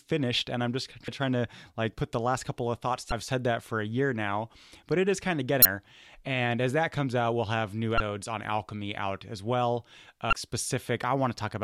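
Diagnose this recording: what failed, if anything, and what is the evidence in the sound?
The compressed stream carries damaged data. Short glitches cut through the speech at 1.05–1.08, 3.09–3.12, 5.62–5.65, 7.97–8.00 and 10.30–10.33 s, each about 34 ms. Corrupted frames are misdecoded until the decoder resynchronises on the next valid header.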